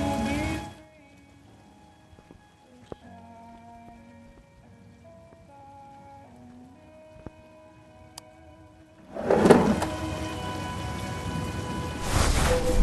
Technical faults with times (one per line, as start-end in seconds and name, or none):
0.53-0.89 zipper noise
9.07-9.44 zipper noise